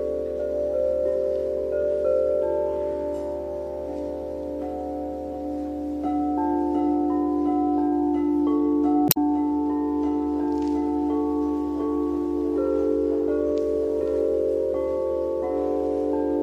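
Throughout the audio the upper detail has a watery, swirling texture with metallic chirps on bright sounds and softened attacks. This points to likely MP3 compression at a low bitrate, one that fits roughly 64 kbps. Unlike a plain low-pass filter, weak high frequencies flicker on and off frame by frame instead of fading smoothly. From 9.05 to 9.17 s, damaged data in a compressed stream produces a brief break in the sound as the decoder loses sync and finds the next frame. Unlike the steady compression smearing, this is a single isolated break.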